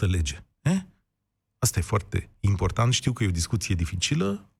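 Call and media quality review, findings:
CD scratch ticks, 3.06–4.16 s: surface blemish exceeds disc error correction once per revolution; player interpolates or mutes the lost samples. Result: nine regular ticks, roughly eight per second, each only a few milliseconds, cutting briefly into the speech.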